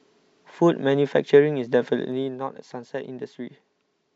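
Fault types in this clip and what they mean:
Zipper noise: Between 1.92 and 2.46 s the speech is turned down by around 10 dB. The drop comes in 1 dB steps, about twenty a second, with no smoothing. Each step clicks. Together they form a fast ticking buzz over the speech.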